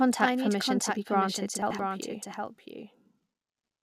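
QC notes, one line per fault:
Throughout: doubled audio track. The same audio is likely being picked up a second time through a slower path. A dry, full-band copy trails about 0.7 s behind, roughly 5 dB quieter, with no decay.
1.62–1.79 s: chunks out of order. An 85 ms chunk of audio arrived one chunk late and played after the chunk that should follow it, so the moment sounds jumbled.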